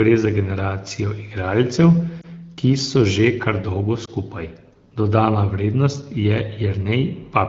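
A speech recording over an AMR-WB (HD Voice) call path, with two lost AMR speech frames, brief dips or warbles at 2.22–2.26 s and 4.05–4.10 s. Each sounds like one corrupted 20 ms frame that the decoder concealed by reusing the previous frame's settings at lower gain.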